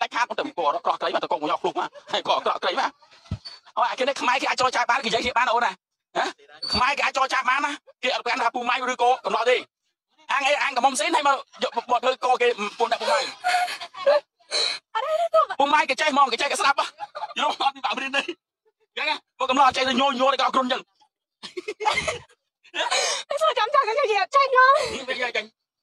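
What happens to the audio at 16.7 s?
Nothing goes wrong at 16.7 s; the audio carries on intact through that moment with no dropout, click, distortion or other fault.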